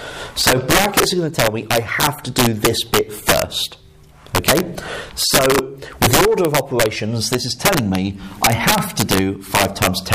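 Integer overflow runs through the whole clip. Peaks are driven only about 1 dB past the integer limit, but instead of being held there they wrap to the opposite sign. Roughly one or two percent of samples flip this way, giving sharp, violent cracks on peaks.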